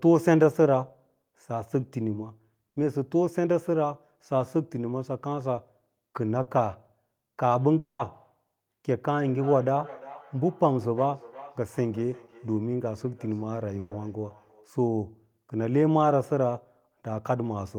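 At 2.69 to 2.77 s, a burst of packet loss means several consecutive packets of this speech arrive too late to be played. The receiver stretches the last sound across the 70 ms hole, fading it as it goes, so a held buzz or dimming hiss replaces the real audio. Speech then resumes slightly ahead, with the missing stretch simply gone.

At 5.56 s comes a short concealed packet loss. About 10 ms never reaches the decoder in time, and the receiver patches it by extending the preceding sound, pitched if voiced and as shaped noise if not, before blending back. The result is a tiny smear or wobble, brief enough that a quick consonant could drop out.

A second burst of packet loss hits from 6.42 to 6.48 s, covering 50 ms with the same faded continuation, then a jump forward.

From 7.78 to 8.00 s the sound stops arriving altogether, most likely a long network dropout. The last sound is carried on as a decaying buzz or hiss, and for roughly the final 140 ms only silence remains. 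When the audio returns, the 210 ms in between is missing.

Between 9.19 and 14.72 s, feedback echo between two devices sets in. A second device in the same room plays back what the first microphone sent, that microphone picks it up again, and neither echo canceller removes the other device's output. Each stretch of speech recurs about 0.4 s later, thinner and more ringing, at up to about 20 dB below the direct speech.

Within that echo, at 13.79 to 13.92 s, a final burst of packet loss replaces 120 ms with a fading continuation rather than silence before the speech picks up further on.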